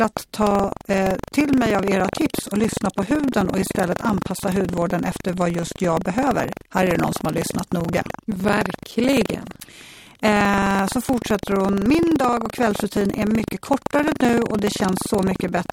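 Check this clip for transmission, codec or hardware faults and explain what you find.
The speech carries one hardware fault, present for the whole recording.

Buffer tearing runs throughout the clip: the writer filling the playback ring buffer and the hardware reading it have drifted so their positions cross inside each period. Roughly a tenth of every buffer replays audio from about 150 ms earlier, hard-spliced at both edges. Those repeating seams produce a robotic rattle near 23.4 Hz, which fits a 2048-sample buffer, and it sounds only while speech is present.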